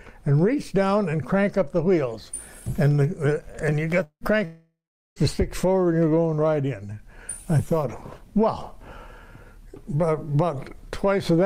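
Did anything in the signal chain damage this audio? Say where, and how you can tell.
Yes: two long network dropouts, at 4.03–4.24 s and 4.45–5.19 s. Each begins with the last sound smeared into a fading buzz, then silence (60 ms, then 370 ms) before audio resumes with material missing. Concealment running dry, unlike brief packet loss, points to a likely network stall.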